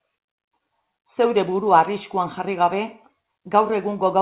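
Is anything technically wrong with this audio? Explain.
No, nothing technically wrong can be heard here.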